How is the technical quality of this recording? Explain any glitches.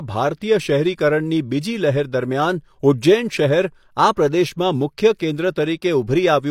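There is one audible glitch, a pre-echo, at 5.18 to 5.20 s, just after "પ્રદેશમાં મુખ્ય". A transform codec spreads its quantisation noise across an entire block. A sharp onset lands near the end of that block, so noise sized for the loud onset also covers the quiet stretch just before it. The result is a short hiss of about 22 ms that arrives ahead of the attack and leaves the onset blurred rather than crisp.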